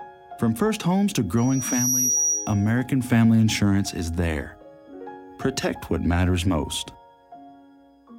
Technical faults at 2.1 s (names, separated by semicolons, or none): loudspeaker feedback squeal